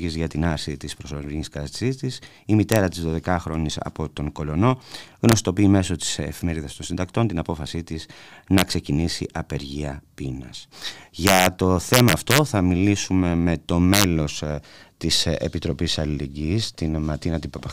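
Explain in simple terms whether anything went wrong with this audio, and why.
Yes, something went wrong: integer overflow. When the speech got loud, the numbers storing it exceeded their limit and wrapped around to the opposite extreme instead of capping. That produces harsh cracks at 2.72–2.76, 5.29–5.33, 8.58–8.62, 11.27–11.46, 11.94–12.38 and 13.94–14.04 seconds.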